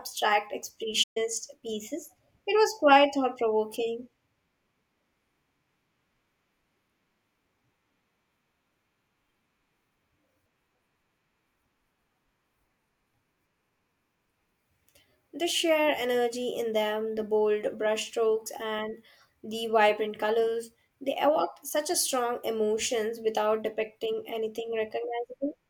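A playback stall occurs at about 1.03 s and lasts until about 1.17 s. For roughly 125 ms the output drops to silence in mid-flow, then the speech carries on. The likely cause is the player running short of buffered data, or its playback thread being held up, so nothing reached the output until it recovered. It is heard as a sudden hole, not a fade.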